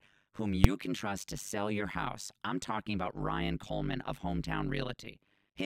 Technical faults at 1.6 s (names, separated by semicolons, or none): overlap-add ripple